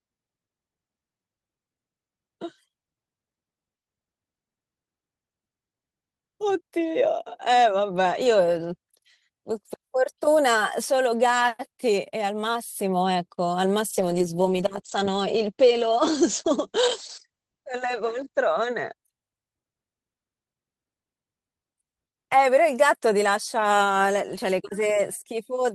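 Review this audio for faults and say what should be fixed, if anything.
A call bitrate drop runs from 13.91 s to 19.01 s. The bandwidth estimate collapsed and the Opus encoder was starved of bits for about 4.5 s, so the speech turns coarse and muffled, losing everything above 8 kHz, which fits a fall from roughly 40 kbps to 11 kbps. Setting a higher minimum bitrate floor and smoothing bandwidth-estimate reactions to short congestion would prevent it.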